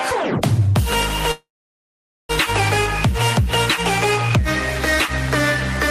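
Packets were likely stalled in transit, causing a call audio freeze from 1.31 to 2.31 s: a fading continuation, about 0.84 s of silence, then resumption with nothing lost.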